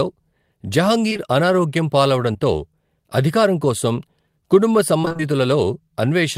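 At 1.09 s, 1.13 s and 1.17 s, three back-to-back instances of short concealed packet loss run through to about 1.34 s. Each drops roughly 20 ms of audio that arrived too late to decode. The receiver bridges each hole by extending the preceding sound for 13 to 18 ms and then crossfades back. This produces a brief smeared, slightly wavering patch, and the last gap stretches the timing a little. A fourth single loss at 2.33 s does the same, leaving a short smear.

From 5.01 to 5.22 s, immediately after "అధికారం కోసం కుటుంబ", the fault becomes repeated packet loss with a robotic sound. Five gaps in about 0.2 s remove roughly 100 ms of audio, and the longest single gap is 26 ms. Concealment fills about half of that stretch, with one patch of extrapolated sound following soon after another. The result is choppy, with pieces of the speech missing.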